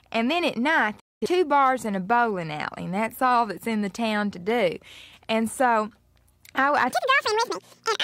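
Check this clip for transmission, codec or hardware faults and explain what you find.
Two faults are audible: a brief broadcast dropout near the start and a sped-up section at the very end.

Digital broadcast dropout, 1.00 to 1.26 s. Right after "and then at night" the sound fades out over about 8 ms and falls silent. It resumes at "bars and a bowling". The receiver stopped trusting the incoming data and muted, so roughly 213 ms of programme is gone. That length fits about five lost frames. A waveform shows a flat gap, and a spectrogram shows a clean vertical blank band.

Section at the wrong speed, 6.90 s to the end. After "I I" the audio suddenly plays twice as fast, and pitch rises with it by roughly ten semitones, giving a chipmunk-like, hurried sound. Tempo and pitch shift together, so this is likely a player or edit running the segment against the wrong clock. On a spectrogram the harmonics jump upward and spread apart, and syllable envelopes in the waveform compress to half their length.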